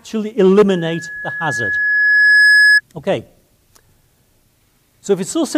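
From 0.68 s to 2.81 s there is loudspeaker feedback squeal. A microphone is picking up its own loudspeaker. At 1.7 kHz the loop gain passes one. That tone swells over about two seconds. It peaks a few decibels above the sound.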